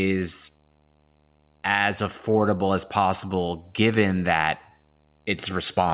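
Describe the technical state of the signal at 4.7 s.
A screen or video cable is coupling into the audio path, so at 4.7 s there is video or display buzz: a steady 75 Hz buzz at the picture's field rate, about 40 dB below the speech, with fine hash riding above it and sitting under everything.

The sender's clock runs roughly 3% slower than the receiver's, which is clock drift between sender and receiver. The jitter buffer keeps draining, so the receiver has to fill the gap, leaving the timing slightly loose and the pace faintly unsteady at this point.

Repeated timing corrections run from 0.51 s to 5.84 s, covering 4.7 s. The receiver keeps repeating short pieces to stay in step, slowing playback to 97% and adding around a fifth of a second overall. These are small and unevenly spaced, heard if at all as slight hiccups, with the sound band-limited to 4 kHz by the G.711 call codec.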